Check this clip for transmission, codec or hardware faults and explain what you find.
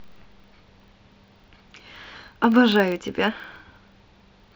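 One fault runs through the whole recording. A steady 25 Hz buzz of small ticks sits under the speech, louder where the speech is louder. This is a filter restarted on every block: its memory is cleared each 40 ms, so every block starts from silence with a brief transient.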